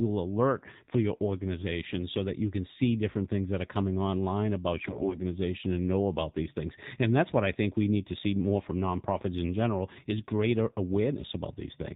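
Speech coded with the AMR narrowband mobile codec runs throughout. Its spectrogram stops hard at 4 kHz, and the buzzy, synthetic tone fits a low mode near 7.4 kbps. From 4.74 to 5.21 s, between "that are coming online" and "and know about these", AMR bit errors from heavy corruption scatter the excitation pulses. The voice turns scratchy and gargly, with smeared, speckled harmonics on the spectrogram while its level holds steady.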